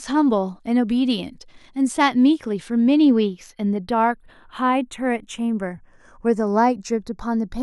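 Throughout the speech, the channels are drifting apart: the two sides run on separate clocks roughly 30 ppm apart, so their offset creeps to about a fifth of a millisecond. Summed to mono, this gives slow flanging, seen on a spectrogram as comb notches gliding gradually across frequency.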